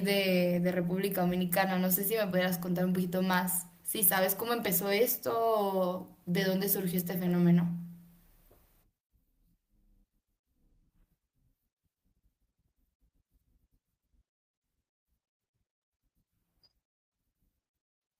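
Nothing here trips the ear: no dropouts, glitches or distortion turn up anywhere in the recording.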